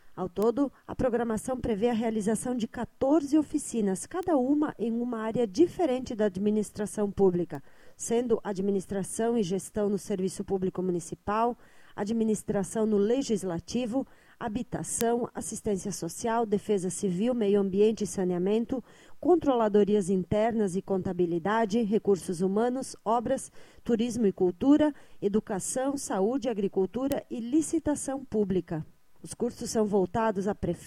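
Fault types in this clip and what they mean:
Bit error spike: a single flipped sample jumping and returning, heard as five isolated sharp ticks unrelated to the sound, unlike clicks from editing or dropouts.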